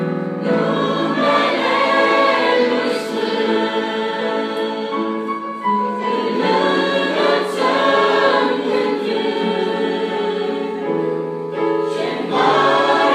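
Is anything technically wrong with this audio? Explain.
No, there's no technical fault.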